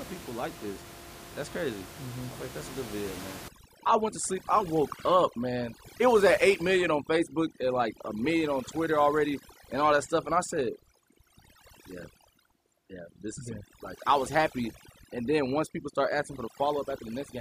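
From 3.48 s, after "a good video man", to the end, overdone noise removal cuts bands near the noise estimate: twinkling specks, a spectrogram full of isolated speckles, with the room noise underneath about 15 dB below speech.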